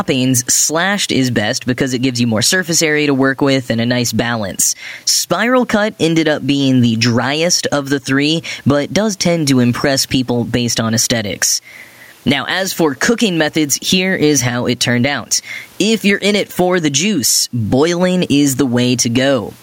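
Gain pumping runs through the whole recording, with the gain swinging by around 10 dB. The likely cause is input gain set much too high for the microphone, with a fast limiter or compressor clamping down on each loud syllable and releasing in the gaps. The room noise sits about 43 dB below the speech, and the speech itself sounds squashed and flat in level.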